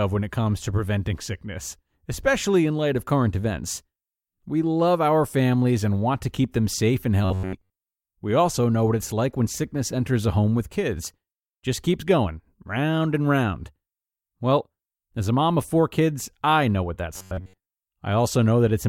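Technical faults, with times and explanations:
7.25–7.93 s and 17.14–17.74 s, robotic sound from repeated short buffers: right after "keep them safe and" and again after "kids I know what", the speech goes to a stiff metallic buzz pinned near 94 Hz. That pitch fits a chunk of about 10.7 ms being replayed over and over, with most of the real audio skipped in between, most likely because new data wasn't arriving fast enough to keep playback fed.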